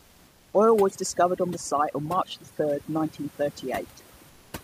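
From 0.00 to 0.53 s and again from 4.29 to 4.53 s, the pauses hold comfort noise in place of the background. The real room noise gives way to a smooth, featureless hiss about 3 dB quieter, likely from discontinuous transmission such as Opus DTX synthesising fill noise. Unlike over-aggressive suppression, this hiss stays even, with no twinkling.

Throughout the clip, overdone noise removal pulls individual frequency bands down whenever they sit near the noise estimate. The room noise, about 33 dB below the speech, breaks into sparkling specks between phrases, and the voice's quieter components vanish with it.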